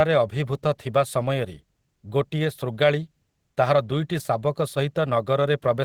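No audible faults anywhere in the speech recording: no dropouts, level jumps or timing breaks from one end to the other.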